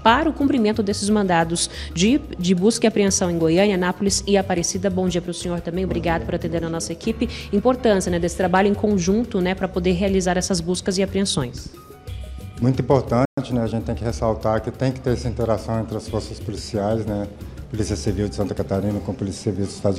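The audio breaks off at 13.25 s and stays silent until 13.38 s, a playback stall of about 120 ms. The player most likely ran out of buffered data or had its output thread blocked. On a waveform this is a flat, empty gap; on a spectrogram it is a blank vertical band across all frequencies. From 13.38 to 14.18 s the player makes up the lost time with time-compressed catch-up, running about 1.15 times fast at unchanged pitch. It does this by dropping short slices and cross-fading the joins. On a spectrogram the harmonics stay at the same heights while events sit closer together in time, with small smeared seams at the splices.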